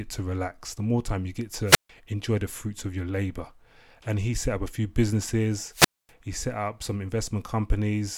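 At 1.65–1.89 s, after "more time you get", and 5.71–6.12 s, after "up a few businesses", wireless microphone squelch dropouts occur. The radio signal fades until the receiver mutes, giving a hiss burst, then 145 ms and 246 ms silences. These show as flat waveform and blank spectrogram columns.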